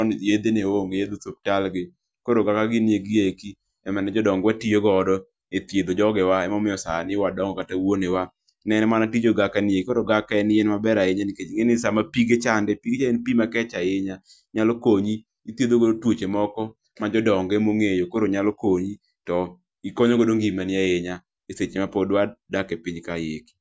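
No technical faults can be heard anywhere in the speech recording.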